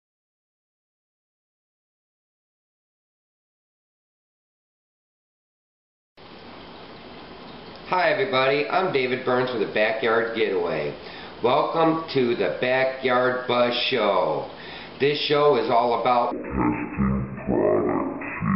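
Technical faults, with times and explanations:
16.31–18.55 s stereo read as mono: half speed, an octave low, with a faint mirrored image up high, because interleaved left and right samples play as one channel.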